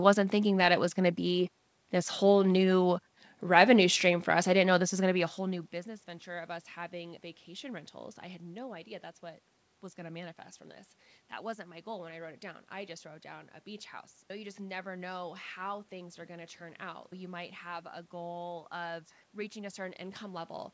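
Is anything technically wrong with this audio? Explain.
No, nothing is technically wrong with this audio.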